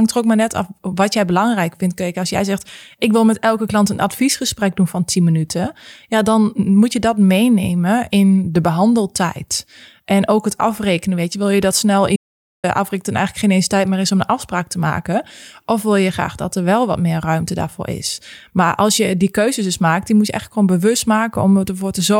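An audio dropout to silence runs from 12.16 to 12.64 s, just after "wil je dat snel". The speech stops abruptly and the signal falls to silence for about 0.48 s, with no room tone or background hiss underneath, before the speech resumes mid-flow. That flat, empty gap points to the input being lost, likely through a momentary disconnection or mute, while the recording carried on writing silence, so whatever was spoken in that half-second is gone.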